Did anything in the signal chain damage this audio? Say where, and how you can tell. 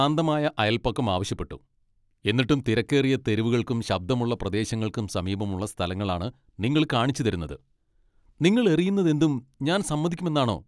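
No, nothing in the signal chain left audible damage on this speech recording. No stage, from capture to playback, shows any sign of a problem.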